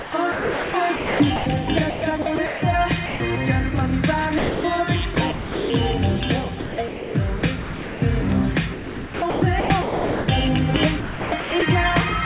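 Sound chopped by the voice detector, likely, at 0.0–3.2, 4.38–5.7, 6.6–8.02, 8.74–10.28 and 11.0–11.62 s: quiet edges drop into comfort noise. The call path carries nothing above 4 kHz.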